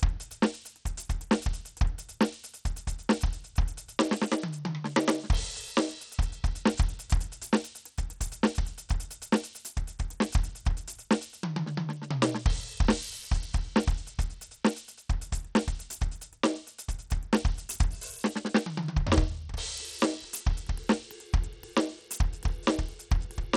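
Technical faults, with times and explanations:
Throughout: Bluetooth SBC compression. The music was likely squeezed through the SBC codec at a low data rate, consistent with roughly 80 kbps, so its simple bit allocation leaves the quieter upper sub-bands with few or no bits and quantises the rest coarsely. The damage is plainly audible: the treble thins out and flickers in and out, and a gritty grain with aliased harshness rides on top of the music.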